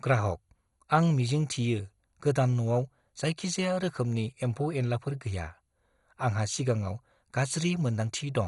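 Throughout the speech, nothing reaches above 11.2 kHz, and a heavy gurgling, granular roughness sits on top as upper bands flicker on and off. This is likely MP2 compression short of bits, fitting roughly 56 kbps. A plain low-pass filter would sound steadily dull instead.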